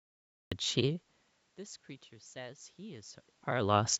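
There's a cut-off start. The recording began late, so it's digital silence until 0.52 s, then the speech jumps in mid-sound with no natural attack.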